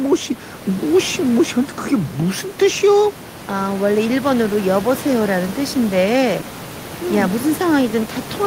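No technical faults occur anywhere in the speech; the room's background noise, about 15 dB below the voice, belongs to the recording itself.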